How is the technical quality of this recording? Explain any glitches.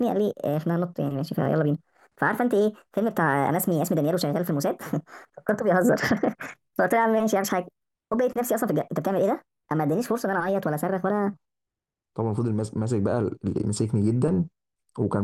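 The recording has one clear fault: a section at the wrong speed. From the start to 11.33 s, the speech runs 1.38 times too fast, so pitch rises by about five semitones and pace quickens with it. Voices sound chipmunk-like and rushed, then drop to natural pitch and tempo at 11.33 s. The likely cause is playback or editing against a mismatched clock. A pure pitch shift would raise the tone without hurrying the delivery, and a time-stretch would quicken it without raising the pitch. Here both change in lockstep, which marks a plain speed error.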